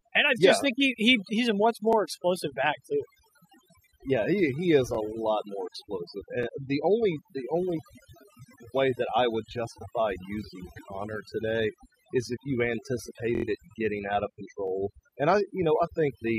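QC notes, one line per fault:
Throughout, overdone noise removal. The background drops and breaks up into twinkling specks. Quiet parts of the speech vanish with the noise. Bands near the noise level are pulled far down or cut.
1.93–1.95, 4.95–4.97, 6.43–6.46, 13.35–13.44, 14.68–14.70 s, repeated buffer. A 23 ms slice plays twice, with a hard join, heard as a brief stutter. This fits a 1024-sample buffer. At 13.35 s, just before "it getting out of", it repeats four extra times.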